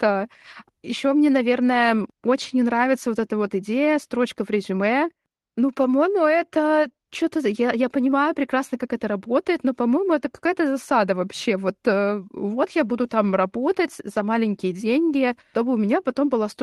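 No technical faults are audible.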